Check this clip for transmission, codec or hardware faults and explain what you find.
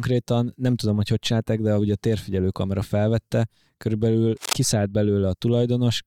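One hardware fault is present: a burst of cable scratch noise in the speech. It runs from 4.37 to 4.53 s, right after "térfigyelő kamera felvette körülbelül", and sits only a few decibels below the speech level. The sound is a dense, irregular crackle and rustle laid over the speech for a moment. This likely comes from a worn cable, connector or control being moved, so that its contact resistance fluctuates rapidly and injects uneven noise bursts into the signal.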